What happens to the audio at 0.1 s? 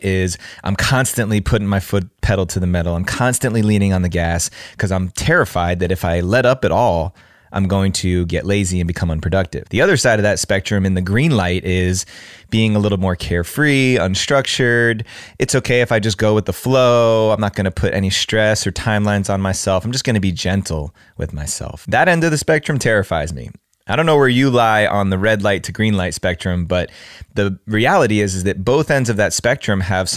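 Nothing goes wrong at 0.1 s; the speech plays through that moment intact, with no dropout, click or distortion.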